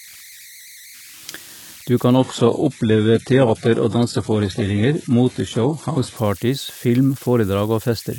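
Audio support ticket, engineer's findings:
Converter idle tones, whole clip. Whistle near 2 kHz in pauses, grainy under quiet speech, about 23 dB below signal. Undithered delta-sigma converter cycling on small input.

Adaptive stream at a lower bitrate, 2.17 to 6.17 s. Sudden dull, synthetic treble, nothing above 11.5 kHz, no gap. Points to a switch to a low-rate HE-AAC version.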